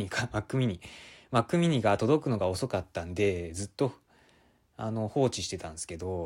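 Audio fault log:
No faults detected on this speech recording; nothing to log.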